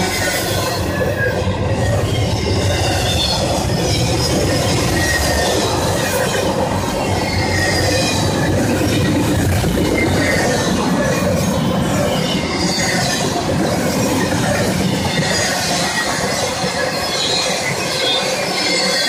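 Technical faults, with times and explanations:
Nothing technical stands out here; there's nothing to flag anywhere in the clip.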